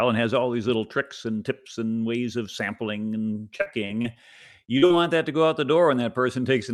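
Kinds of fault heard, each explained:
Repeated packet loss (robotic sound): From 3.57 to 4.06 s the speech keeps breaking up as audio arrives late or not at all, four gaps in under half a second, the longest about 42 ms. Each gap is bridged by extending the preceding sound, so about a quarter of that stretch is synthetic continuation, giving a choppy sound with pieces missing. On a spectrogram, harmonics turn smeared and flattened in short repeating patches. The waveform shows repeated, overly regular cycles where detail should be.
Short concealed packet loss: Two brief holes of about 40 ms each, at 4.78 to 4.84 s and 4.86 to 4.92 s, separated by only 20 ms of intact audio. The receiver filled each by carrying the last sound forward and then easing back into real audio, which is heard as a quick smear or wobble. On a spectrogram each shows as a short block of frozen, blurred content. The waveform shows a stretch of continued sound with a soft crossfade at each end.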